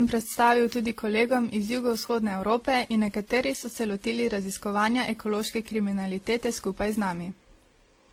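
From the first second to the last, the speech carries a layered set of compression artefacts rather than one consistent codec signature. The artefacts of the different stages are heard together, with nothing above 20 kHz. That blend points to transcoding between lossy codecs, likely a WMA 1 encode around 48 kbit/s, then Opus near 16 kbit/s, then WMA 1 again near 96 kbit/s. Each pass encoded the previous damage and added its own.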